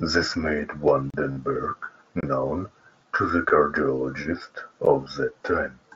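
At 1.10 to 1.14 s there's a block of digital silence, about 35 ms, likely where the output buffer wasn't filled in time, dropped straight to silence, so the sound cuts out and back around a short hole. At 1.31 to 1.37 s comes concealed Bluetooth headset packet loss. About 52 ms went missing, which points to roughly seven lost frames, and the receiver patched it by repeating recent waveform, giving a held buzzy tone with a slight warble as real speech returns. Two more silent blocks follow: 23 ms at 2.21 to 2.23 s, which fits a 1024-sample buffer, and a 12 ms tick at 4.85 s, which fits a 512-sample one. A brief 15 ms concealed loss at 5.05 s, two lost frames, closes the run of faults, and the mSBC headset codec adds a light graininess on loud sounds.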